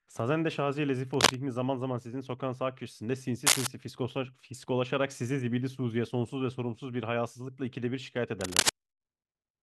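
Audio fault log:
1.14–1.35 s, 3.46–3.67 s and 8.41–8.69 s: cable scratch noise. Each burst lasts about 0.2 to 0.3 s and sits roughly 5 dB above the speech, reaching about 10 dB in the middle one, so it is heard as scratchy rustling over the sound. The likely cause is a worn cable, connector or control being moved, so its contact resistance jumps erratically. On a spectrogram these appear as dense, ragged broadband smears. On the waveform they show as irregular, spiky bursts.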